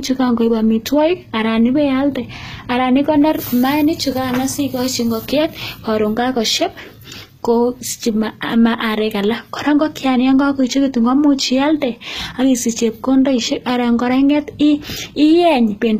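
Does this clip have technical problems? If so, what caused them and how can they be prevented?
Yes. Throughout the speech there is plainly audible HE-AAC compression damage, with nothing above about 14.9 kHz. The treble sounds synthetic: s sounds come out gritty and lispy because the upper band is not the original signal but lower bands copied upward by spectral band replication and shaped with a coarse envelope, so harmonics fail to line up across the crossover. The likely cause is a low-bitrate HE-AAC encode, and the sound fits a stream around 20 kbps. To prevent it, encode speech with plain AAC or Opus at 48 kbps or higher so the full spectrum is coded directly.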